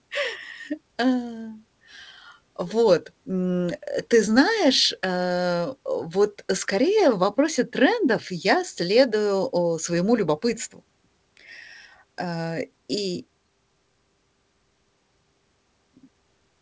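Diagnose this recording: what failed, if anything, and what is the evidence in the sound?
Nothing stood out on listening to this speech recording, which came through a WebRTC call path using G.722 at 64 kbps, with no content above 8 kHz.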